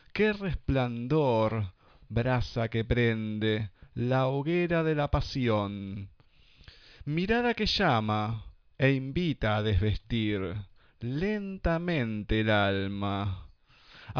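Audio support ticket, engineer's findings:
No faults found; audio path checks out.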